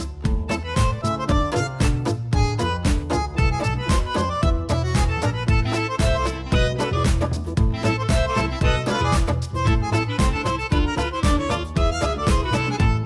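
No technical faults can be heard anywhere in this audio. Nothing in it points to a problem in how it was captured, processed or delivered.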